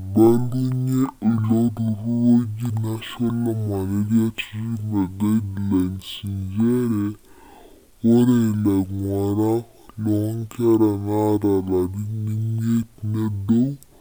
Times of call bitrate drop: none

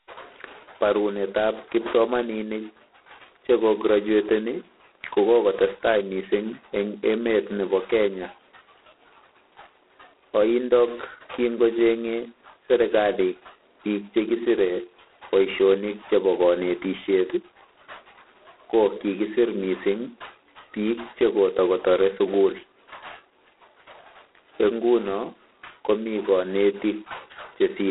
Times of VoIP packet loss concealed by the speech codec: none

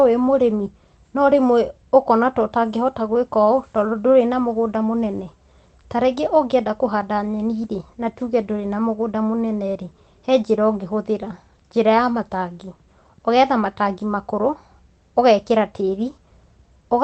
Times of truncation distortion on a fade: none

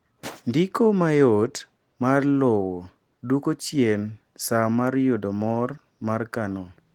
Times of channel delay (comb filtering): none

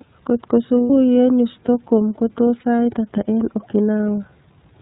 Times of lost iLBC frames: 0.81-0.90, 2.60-2.64

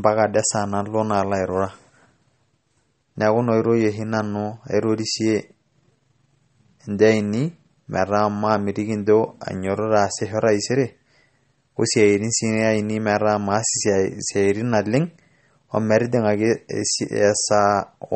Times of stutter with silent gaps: none

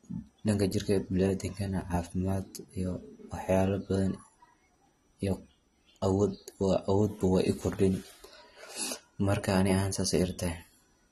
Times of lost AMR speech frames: none

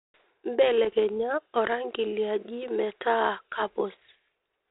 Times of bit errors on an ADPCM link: 0.85-0.98, 3.62-3.68

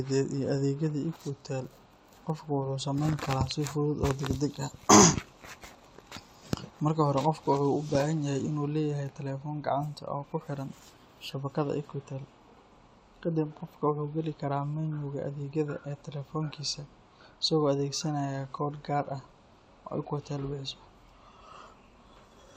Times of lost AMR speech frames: none

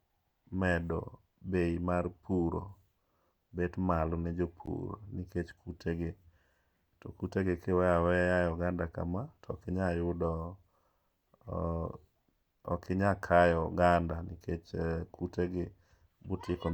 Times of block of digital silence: 4.66

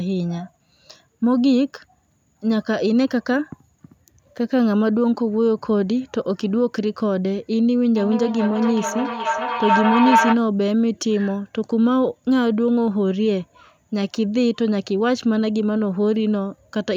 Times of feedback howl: 7.96-10.45

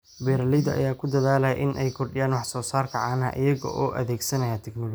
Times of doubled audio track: none

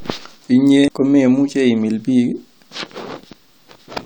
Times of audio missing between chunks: 0.88

